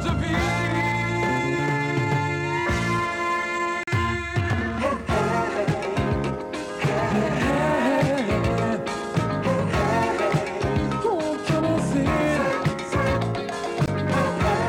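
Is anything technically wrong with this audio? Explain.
Yes. A gap between stream segments occurs at 3.83–3.88 s (about 41 ms) and at 13.86 s (about 18.5 ms). Adjacent segment timestamps don't meet, and the player fills the hole with hard-edged silence. Unlike a dropout, nothing is lost; the sound resumes exactly where it stopped, just later.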